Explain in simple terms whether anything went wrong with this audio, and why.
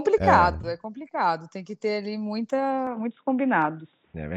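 At about 2.87 seconds the speech suddenly turns dull and boxy and stays that way to the end, with nothing above about 3.8 kHz and faint new background noise. This is most likely an input switched to a poorer device, such as a headset's call mode. Loudness doesn't change and there is no gap at the switch. What sets it apart from a simple muffling effect is that the change happens in one instant and brings its own new noise with it.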